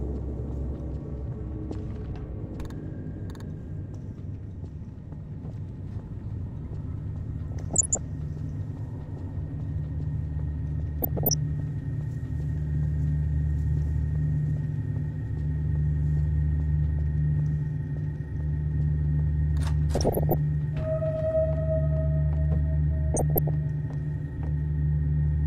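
DAB burbling breaks in four times: 7.52 to 7.98 s, 11.02 to 11.34 s, 19.95 to 20.35 s, and 23.14 to 23.49 s. Weak reception leaves bit errors, on the order of half a percent, that the error correction misses. Corrupted MP2 samples put short blips of noise in single sub-bands, and corrupted scale factors make sub-bands jump in level for up to a frame, giving a burbling over the audio. On a spectrogram this shows as scattered rectangular blocks in fixed frequency bands. The waveform shows short, irregular bursts.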